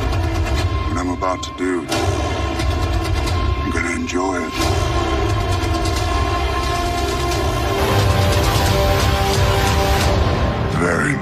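From the start to 7.78 s the audio suffers channel delay (comb filtering). One channel arrives roughly 3 ms late, and when the pair is folded to mono, shared content cancels at evenly spaced frequencies, beginning near 150 Hz. The result sounds hollow and phasey, as if heard through a tube. A spectrogram shows fixed horizontal dark bands stacked up the spectrum. The notches vanish after 7.78 s.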